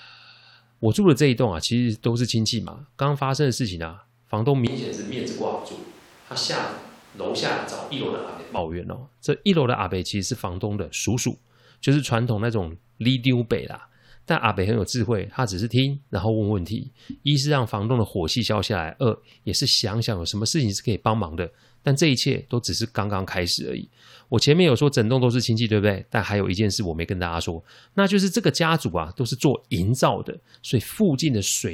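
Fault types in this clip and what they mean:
Switch to a distant microphone: from 4.67 to 8.58 s the speech abruptly turns roomy and hollow, thinner in bass, some 5 dB quieter and noisier, likely a far-off microphone standing in. Unlike a level drop or EQ change, room reflections start and stop suddenly.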